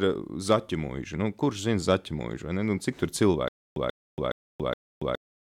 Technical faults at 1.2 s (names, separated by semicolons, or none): none